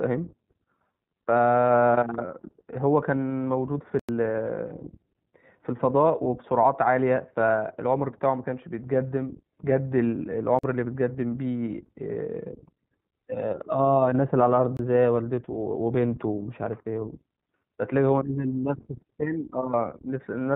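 Throughout the speech the sound is band-limited, with nothing above 4 kHz, and carries a plainly audible rough, slightly synthetic edge. That is the iLBC codec, a narrowband VoIP coder that encodes each 20 ms frame's excitation on its own rather than predicting from the previous frame. It runs here at 15.2 kbps, and the coarse excitation modelling explains the grainy quality heard across the whole clip.

From 3.16 to 3.18 s a brief held, faintly buzzy stretch replaces the speech for 20 ms, then the speech returns cleanly right afterwards. This is a lost iLBC frame. A single packet went missing, and the decoder filled the gap by repeating the last pitch cycle blended with noise. Because each iLBC frame stands alone, the decoder recovers on the very next frame with no lingering smear.

Three hard dropouts follow, each cutting into dead silence and back out again, with no fade. The first runs from 3.99 to 4.09 s and lasts about 93 ms, long enough to hear as a short hole. 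The second runs from 10.59 to 10.64 s (46 ms). The third runs from 14.77 to 14.79 s (23 ms). These are blocks of digital silence, where samples were replaced by zeros. The lengths halve each time, which fits blocks of 4096, 2048 and 1024 samples and suggests an output buffer that was not filled in time.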